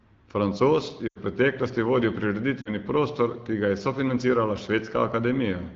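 At 1.08 to 1.18 s and again at 2.61 to 2.74 s, lost AMR speech frames smear the speech. The decoder repeats its last pitch and vocal tract settings with fading gain, so the voice drops to near silence within two frames, which fits runs of about 80 and 40 ms.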